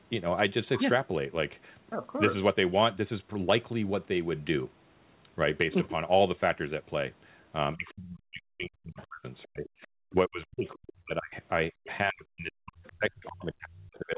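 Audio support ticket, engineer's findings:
Speech suppressed in double talk. Talker's level collapses by around 40 dB at 7.75–9.26 s, 9.45–9.66 s, 9.87–11.34 s, and 12.06 s to the end. Likely the echo canceller's suppressor firing while both ends spoke. It could not tell near speech from loudspeaker echo and attenuated everything. Drops are deep. Audio is band-limited at 4 kHz throughout, consistent with G.711 narrowband.

Other side's voice leaking through. Brief scrap of a second voice at 8.99–9.03 s, inside the first suppressed stretch. Low level, roughly 25 dB under the talker. Likely residual loudspeaker echo the canceller failed to remove from the mic signal. Too short to follow. Heard as a faint fragment, not continuous crosstalk.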